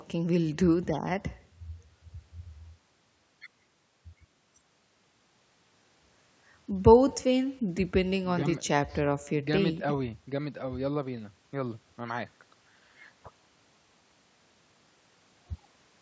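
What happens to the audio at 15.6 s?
At 15.6 s the speech carries an echo with no canceller, as it does across the whole clip. The far end's loudspeaker feeds its microphone and nothing removes it. So a faint copy, about 29 dB down, trails each sound by roughly 150 ms.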